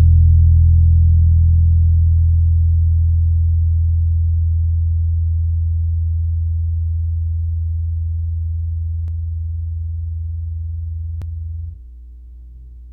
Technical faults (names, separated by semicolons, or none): damaged data in a compressed stream